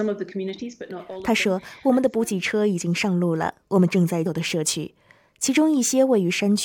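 At 4.25 s the audio jumps abruptly forward with a brief blip, which points to a stream segment skipped, likely because one chunk failed to load. Unlike a dropout, there is no silent gap: the sound resumes at a later point, so material is missing.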